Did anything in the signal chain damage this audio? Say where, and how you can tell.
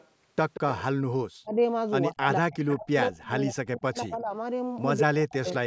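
Yes. A delayed copy of the speech trails it at 0.0 to 0.08 s, 0.54 to 0.83 s and 2.68 to 2.77 s, lagging about 180 ms and peaking roughly 10 dB below the direct sound. This is an echo leak, likely from a far-end echo canceller passing residual loudspeaker pickup.

The speech sinks or drops out in pieces at 1.41 to 1.58 s, 2.12 to 2.58 s, 2.77 to 4.32 s and 5.06 to 5.66 s, with dips of around 35 to 40 dB. This is speech suppressed in double talk, likely from call processing that attenuated everything while both ends were active.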